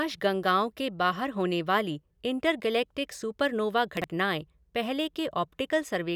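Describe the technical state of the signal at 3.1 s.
At 3.1 s the speech signal is intact, with no dropout, distortion, noise burst or other fault audible at that point.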